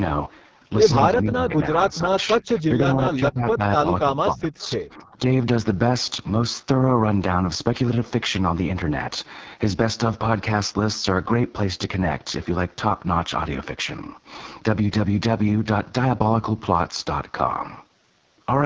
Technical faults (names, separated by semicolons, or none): AMR wideband (HD Voice) codec; speech suppressed in double talk; echo leak